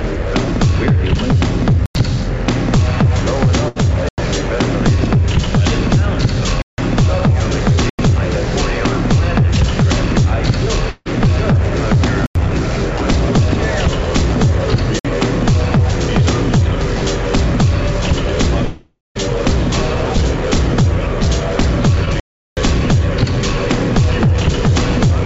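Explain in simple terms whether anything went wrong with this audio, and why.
Several things went wrong, and they fall into four kinds.

The most frequent is a block of digital silence, at 1.86, 4.09, 6.62, 7.90, 12.26, 14.99 and 22.20 seconds. The sound simply switches off to total silence and back, with no fade. Most gaps last about 93 ms, which fits the program missing one full buffer in time. The one at 6.62 s lasts about 160 ms, the one at 14.99 s about 56 ms, and the one at 22.20 s is much longer, about 370 ms. What sets these apart is the hard cut to silence, with no fading sound filling the gap.

At 3.68 seconds there is a burst of packet loss. About 80 ms of audio never arrived, and the receiver covered the hole by stretching the last bit of sound so that it fades out. The audio then picks up slightly further along. Unlike the silent blocks, this gap is filled with a held, dimming sound rather than a sudden cut.

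At 10.90 and 18.65 seconds there are two stretches that were likely a long network dropout. The first loses about 160 ms, and the second about half a second. In each, the last sound is drawn out and fades to silence, briefly in the first case and for about 0.2 s in the second. They are longer than the burst above, so the fill runs out before the audio returns.

At 22.05 seconds, a short concealed packet loss removes only about 20 ms. It is patched so smoothly that it comes across as a brief smear or wobble rather than a gap.

The G.722 call path itself is running as designed. It is the reason nothing above 8 kHz comes through.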